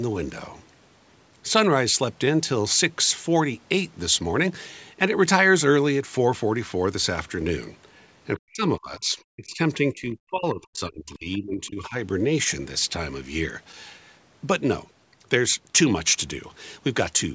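Speech suppressed in double talk at 8.36–9.6 s and 9.79–11.96 s, where this speech drops by up to roughly 40 dB, likely an echo canceller mistaking it for echo.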